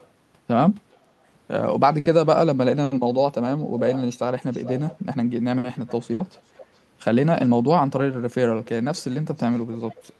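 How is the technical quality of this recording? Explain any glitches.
The speech has two kinds of glitches: repeated echo leaks and two short bursts of packet loss. Through the call path, the sound is limited to about 12 kHz, which fits Opus at around 48 kbps.

Echo leak, at 0–0.06, 0.92–0.97, 3.92–4.0, 4.51–5.01, 5.87–5.93, 6.34–6.77, 7.45–7.49 and 8.62–10.03 s: the far end likely plays the call over a loudspeaker, and its echo canceller lets some pickup slip back. A copy of the speech follows about 0.41 s later. It sits roughly 15 to 40 dB below, and is clearest around 4 to 5 s.

Burst of packet loss, at 1.99–2.08 and 6.13–6.22 s: each time, about 60 ms of audio never arrived in time. The receiver stretched the last sound to cover the gap and faded it, giving a brief held buzz or hiss, then jumped ahead with a piece of speech missing.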